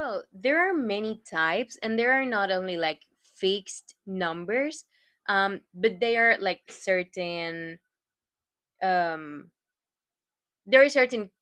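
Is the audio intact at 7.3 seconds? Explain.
Yes, at 7.3 seconds the speech runs intact with no dropout, glitch or other fault.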